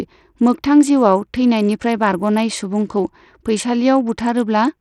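From start to finish, the speech carries plainly audible coding damage. The top end thins out and flickers in and out. A gritty, grainy noise clings to the sound, with aliasing in the upper range. The likely cause is Bluetooth SBC compression running with a small bit pool. The codec splits the signal into a few wide bands. Starved of bits, it drops the weak treble bands and quantises the rest coarsely. The damage fits a bitrate of around 80 kbps.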